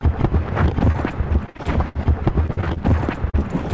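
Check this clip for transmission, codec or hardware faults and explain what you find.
Transmission faults are present: two stretches of repeated packet loss and three short concealed packet losses. The audio stops at 8 kHz, which fits a wideband call codec such as G.722.

Between 1.46 and 1.97 s, and again from 2.47 to 2.78 s, the sound turns choppy and robotic, with pieces missing. This is repeated packet loss. Five gaps fall in each stretch, the longest 60 ms and 42 ms, and each is patched by extending the previous sound. About a third of each stretch is synthetic.

At 0.92 to 0.96 s, 3.30 to 3.35 s and 3.39 to 3.43 s there are brief smears or wobbles. These are short concealed packet losses of 20 to 40 ms. The receiver continued the last sound across each hole, then blended back into the real audio.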